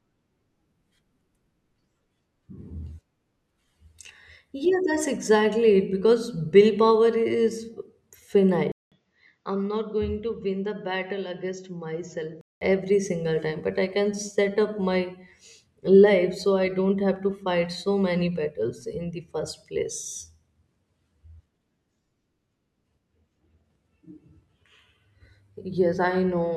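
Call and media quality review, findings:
Input switched to a poorer device, 8.72–12.61 s: 200 ms gap, dull, about 10 dB quieter, likely mic swap; spectrogram shows 7.6 kHz ceiling from "every single time but".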